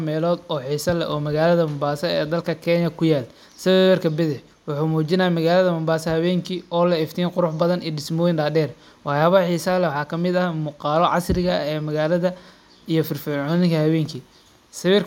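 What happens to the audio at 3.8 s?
A steady buzz at about 94 Hz interrupts the speech from 3.71 to 3.86 s, right after "dalka kenya kuyalo". This is a system hang loop: the driver froze while the hardware kept replaying one 10.67 ms buffer about 14 times, which fits a 512-sample buffer.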